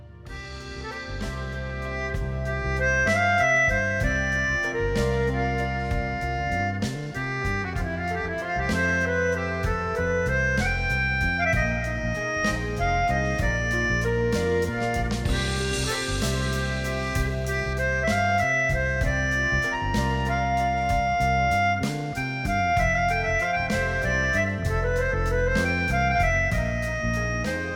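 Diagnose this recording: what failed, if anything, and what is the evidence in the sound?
Pre-emphasis left on, playback stage: from 15.73 to 17.73 s the sound turns thin, bright and sibilant. The top end sits about 8 dB hot at 10 kHz against 1 kHz, matching the CD 50/15 µs curve, so the de-emphasis cut never got applied.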